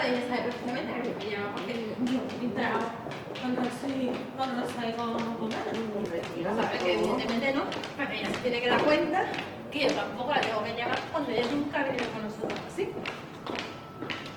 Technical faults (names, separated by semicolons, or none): adaptive stream at a lower bitrate